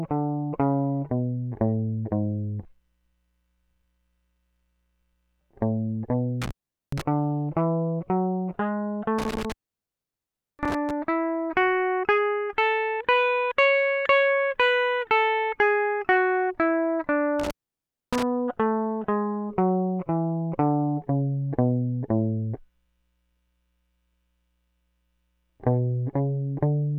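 The music drops out three times, each gap edged with crackle and filled by faint hiss: from 6.42 to 7.02 s with the signal gone for about 0.42 s, from 9.18 to 10.91 s with a longer break of about 1.07 s, and from 17.39 to 18.23 s for about 0.62 s. This is intermittent contact. A loose plug or cable briefly opens the connection, so the audio vanishes and the scraping contact makes the crackles as it breaks and remakes.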